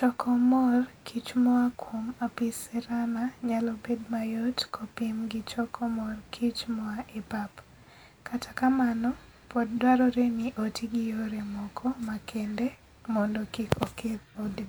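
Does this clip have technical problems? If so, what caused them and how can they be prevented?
No, there are no technical problems to report here.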